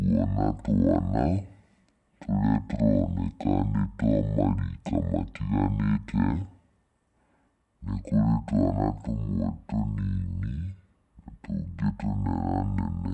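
From start to finish the speech is slowed to half speed and dropped a full octave, so it sounds deep, dragging and sluggish. This is a wrong sample rate fault: samples played at half their recorded rate, which fits 48 kHz audio played back at 24 kHz without conversion.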